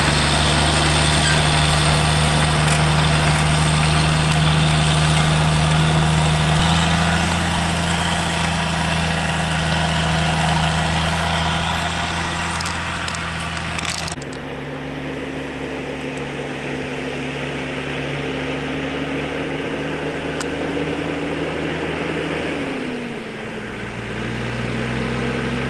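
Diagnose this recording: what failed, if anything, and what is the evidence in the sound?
A skip ahead at 6.59 to 6.61 s, in the network and jitter buffer stage: about a second of audio is lost, and the sound jumps forward with no silence at the join. Unlike a dropout, no gap or fill marks the loss, and timing runs early afterwards.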